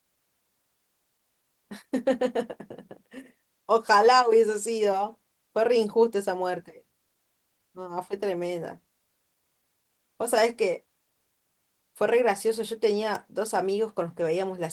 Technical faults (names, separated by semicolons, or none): electrical switching spike